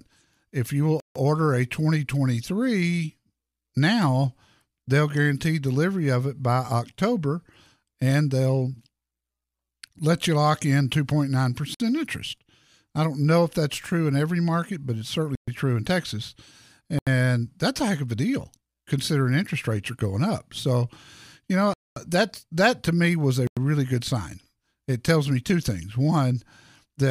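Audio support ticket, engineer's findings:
Bluetooth stall, 1.00, 11.74, 15.35, 16.99, 21.74, 23.47 s: dropouts to silence, 56–228 ms, speech resumes. Likely wireless interference delaying packets, headphone buffer underrun.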